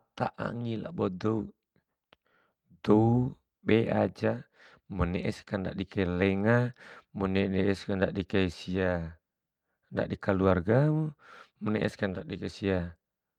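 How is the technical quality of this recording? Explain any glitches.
No glitches can be heard anywhere in this speech recording. Nothing interrupts or disturbs the sound, so there is nothing to explain.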